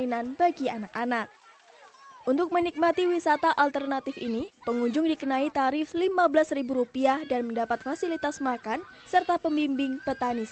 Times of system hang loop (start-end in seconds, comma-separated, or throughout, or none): none